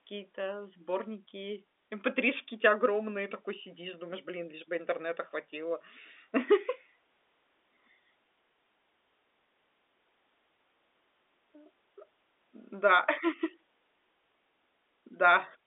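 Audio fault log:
The signal carries a standard G.711 mu-law telephone line at 64 kb/s, with a band running from 250 Hz to 3.6 kHz and nothing heard above 3.7 kHz, and it shows no technical faults.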